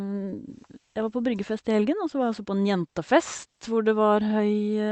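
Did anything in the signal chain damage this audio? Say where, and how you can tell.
Yes. Clock drift between sender and receiver, at the network jitter-buffer stage: the sender's clock runs roughly 5 percent fast, so the buffer keeps overfilling throughout the clip.

Repeated timing corrections in that buffer, from 0.09 to 4.59 s: short pieces are cut at uneven intervals, pushing playback to 105 percent speed with slight hiccups.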